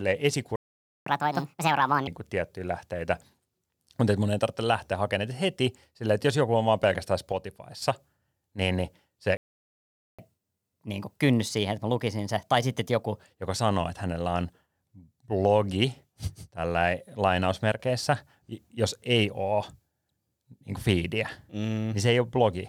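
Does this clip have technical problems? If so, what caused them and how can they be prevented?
Yes. The speech cuts to silence at 0.56–1.06 s (about 0.5 s) and 9.37–10.19 s (about 0.82 s), and then resumes where it left off. That is a playback stall, likely from the player running out of buffered data. Unlike a dropout, nothing is skipped. Larger playback buffers and a player thread that is never blocked prevent it.

Each stall is followed by catch-up at higher speed. From 1.06 to 2.07 s the audio runs at 1.5x and sits roughly seven semitones high until "tiettyjä lähteitä". After "niin niin", from 10.19 to 13.19 s, it runs at 1.15x and about two semitones high until "joka sanoo että hänellä". It differs from a pitch fault because speed and pitch rise together. Catching up by trimming silence, or with pitch-preserving time-stretching, prevents it.

Right after "joku on vaan pelkästään", from 7.32 to 7.82 s, and again at 17.72–17.80 s, the level drops abruptly by about 6 dB and then returns. 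That points to one channel dropping out, likely a stereo channel briefly lost before the mono sum. A volume dip would fade, but this step is sudden and exactly that size. Monitoring per-channel continuity or downmixing from a verified channel prevents it.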